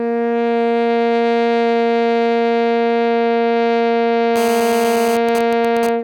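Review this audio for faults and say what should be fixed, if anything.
A 2G mobile phone in a call near the equipment transmitted its radio bursts about 217 times a second, and a stage in the audio path rectified those pulses into the signal. From 4.36 to 5.16 s this produces GSM phone buzz: a hard, raspy 217 Hz tone rich in harmonics, about 11 dB below the music and unrelated to it. Keep phones switched off or well away from cables and inputs, and use shielded, balanced connections.

From 5.17 s the same phone, still in the call but with its user silent, sent only short groups of bursts. The circuit rectified these too, producing GSM signalling bursts until 5.89 s: even ticks with a longer 217 Hz buzz twice a second, roughly 10 dB below the music. Keeping mobile phones out of the recording area, or in flight mode, stops this interference as well as the steady buzz.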